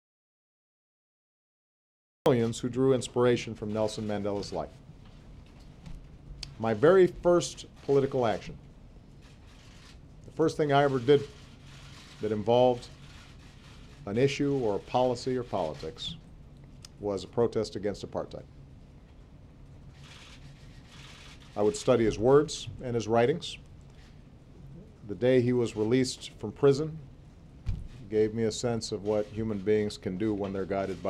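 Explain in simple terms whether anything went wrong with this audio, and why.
From the start until 2.26 s there's an audio dropout to silence: complete silence, likely from a lost input connection, before sound suddenly begins mid-flow.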